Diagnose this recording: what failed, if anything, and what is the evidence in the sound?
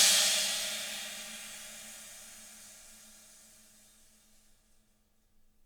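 Nothing stood out on listening that would point to a failure at any stage of the chain.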